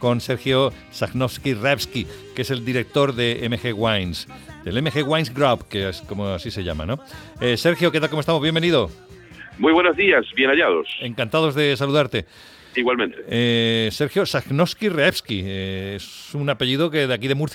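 No technical faults can be heard anywhere in this audio.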